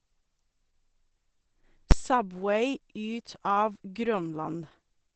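Opus compression runs through the whole speech clip. It sounds muffled and hoarse, with heavy damage and nothing above 15.7 kHz. The likely cause is the encoder working in its speech (SILK) mode at a very low rate, which fits a bitrate around 12 kbps.

Invalid numbers at full scale hit at 1.91 s. A calculation produced invalid or infinite values that were pinned to the largest possible sample value. Because the block lasts only 10 ms, it is heard as a single loud bang.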